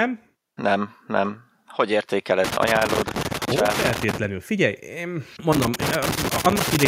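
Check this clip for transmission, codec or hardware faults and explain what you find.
A hardware fault shows up twice: loose connector crackle from 2.44 to 4.24 s and again from 5.53 s to the end at 6.87 s. A worn or dirty contact keeps breaking and remaking the connection, chopping the speech, which comes through as irregular bursts of scratchy crackle.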